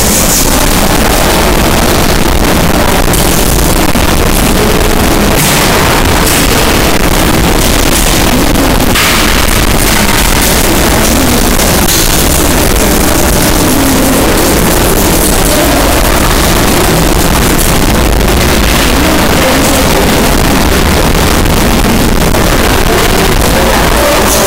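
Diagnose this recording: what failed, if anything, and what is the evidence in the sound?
Float read as integer, at the sample-format conversion stage, throughout the recording. The waveform sits nearly square at an almost fixed, high level, harsh and very loud, with background noise as loud as the main sound, though pitch remains traceable. This is likely 32-bit float data interpreted as 32-bit integer, letting sign and exponent bits dictate amplitude.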